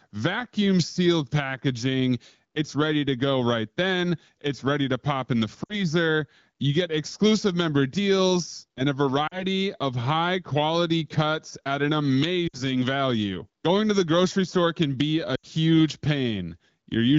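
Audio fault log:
5.63 to 15.46 s, lost AMR speech frames: at 5.63 s, 9.27 s (after "member deals and a"), 12.47 s (after "quality cuts at an") and 15.35 s (after "store can be a"), 40 to 80 ms of frames failed and were concealed by replaying the last good pitch and vocal tract settings at falling gain. The speech smears and dips, then returns briefly rough.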